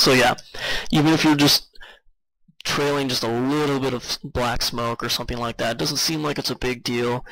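One channel drops out at 1.84 s and stays gone to the end of the clip. The sound falls abruptly by about 6 dB at that moment and stays at the lower level. The likely cause is that one stereo channel stopped carrying signal while the other continued, so the mono sum kept only half of the shared content, a halving of amplitude heard as a sudden, lasting step down in loudness.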